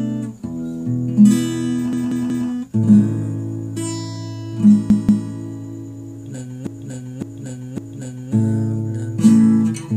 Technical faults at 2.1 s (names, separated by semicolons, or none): repeated frames